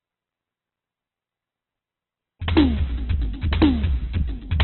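Opus compression runs through the whole of this music clip. Nothing is heard above about 4.2 kHz, and the remaining tones come across heavily roughened, grainy and noisy rather than swirly. That is likely the encoder working in its CELT mode at a very low rate. It holds on to each band's energy but cannot code the detail, so it fills the gaps with folded or noise-like content, and the narrowband cut fits a bitrate down around 8 kbps. A feedback whistle starts at 2.16 s and lasts to the end: a thin, steady tone at 5.6 kHz sitting well below the music and swelling and fading slowly in level. It is likely a loudspeaker-to-microphone loop held just at the edge of feedback, so that single frequency keeps ringing without building into a runaway howl.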